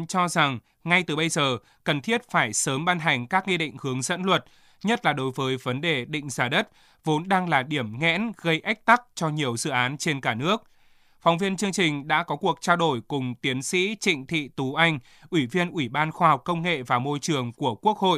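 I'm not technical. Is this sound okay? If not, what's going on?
Yes, this speech recording sounds fine, with no dropouts, glitches, distortion or other technical problems anywhere in it.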